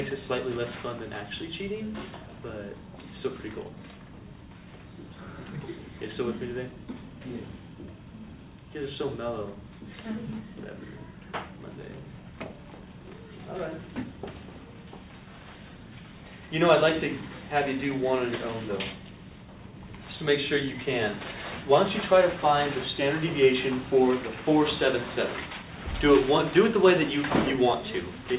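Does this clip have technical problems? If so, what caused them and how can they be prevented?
No, there are no technical problems to fix in this clip. It went through a call path whose codec stops at 4 kHz, so nothing above that comes through, which fits G.711 A-law narrowband telephony.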